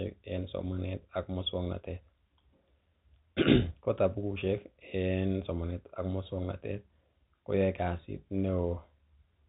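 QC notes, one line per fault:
No faults found; the speech runs over a G.711 mu-law telephone path at 64 kbps, with nothing above 3.8 kHz, as expected for that path.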